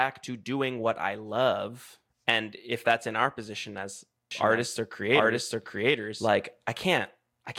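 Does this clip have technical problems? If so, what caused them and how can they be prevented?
Yes. A doubled audio track runs from 4.31 to 6.27 s, starting just after "in our position as". A second copy of the speech trails the first by roughly 0.7 s. It is about as loud as the original. It carries no added room colour. It starts and stops abruptly. The likely cause is the same signal reaching the mix twice, once through a slower path. Prevent it by routing each source into the mix only once and muting duplicate monitoring or capture paths.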